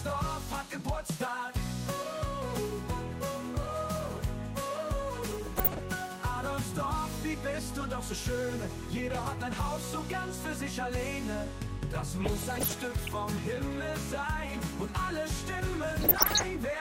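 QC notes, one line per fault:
5.26–5.79 s, 12.21–13.17 s and 16.02–16.44 s: DAB burbling. Weak reception lets bit errors slip past error correction into the MP2 data, corrupting samples, which put short noise blips in single sub-bands, and scale factors, which make sub-bands jump in level for up to a frame. This gives burbling blips over the audio, harshest in the final burst.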